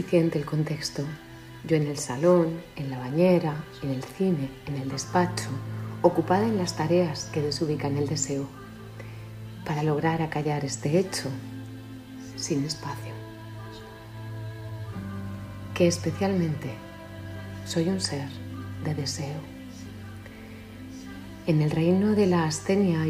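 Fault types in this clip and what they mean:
Nothing here stands out as a fault, so there's nothing to list.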